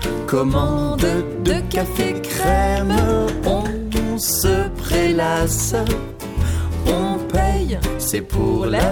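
No technical faults are audible anywhere in this audio.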